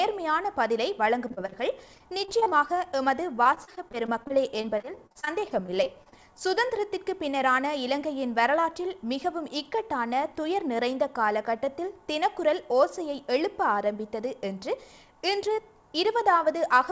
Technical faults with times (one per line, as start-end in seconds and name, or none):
1.28-1.54 repeated packet loss (robotic sound)
1.94-2.53 repeated packet loss (robotic sound)
3.43-6.14 repeated packet loss (robotic sound)